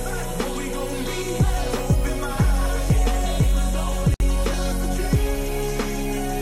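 A gap at a join of encoded pieces breaks the audio from 4.14 to 4.20 s: a gap of about 60 ms whose edges are smeared by the codec, so the silent part is shorter, after which the sound resumes where it stopped. It comes from pieces encoded separately and joined untrimmed, so the end-of-piece frame padding and the next encoder's start-up delay both remain. The joins fall every 6 s, so this is the only one within the clip.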